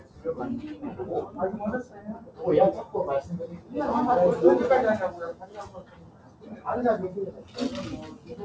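A speech-tuned noise suppressor was left running on this clip of everyday sounds, and it treats steady, sustained parts as noise. Held sounds and decays keep getting pulled down, so the level pumps by somewhere around 15 dB, with everything topping out near 8 kHz through the G.722 call path.

The worst of it is where the noise suppressor turned the sound down hardest: 0.00–0.25 s, 1.84–2.41 s, 3.51–3.73 s, 5.33–6.66 s (the longest dip), 7.32–7.57 s and 8.13–8.34 s. Each one sinks by about 8 to 10 dB, and tails get clipped short while sharp onsets slip through.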